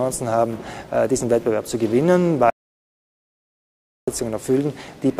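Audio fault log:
2.50–4.08 s, audio dropout to silence: the input feed was most likely interrupted, through a lost connection, a failed link or an accidental mute, while the recorder kept writing silence. The sound stops abruptly mid-flow and the following 1.57 s is silence, with no room tone or background hiss underneath, until the audio returns just as suddenly. Whatever occurred during that stretch is simply missing from the recording.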